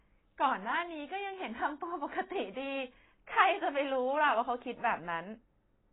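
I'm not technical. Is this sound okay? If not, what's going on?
No, not really. The whole clip sounds muffled and watery, like hearing speech through a cheap phone line. Nothing comes through above about 3.9 kHz, so the crisp edges of the voice are missing, and there's a swirling, fizzy quality on hissy sounds. That's likely heavy AAC compression. The file was squeezed so hard that the encoder threw away the high end and roughly approximated what it kept.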